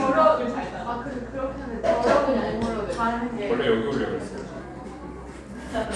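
From 4.61 s to the end at 5.95 s, the audio shows a wrong sample rate fault. The material is played back faster than it was captured, with no rate conversion, so speed and pitch rise together: everything runs about 1.09 times fast and sits about 1.47 semitones higher. That ratio fits 22 kHz material being played out at 24 kHz. The sound takes on a slightly hurried, raised quality, with events arriving a little early and every tone shifted upward.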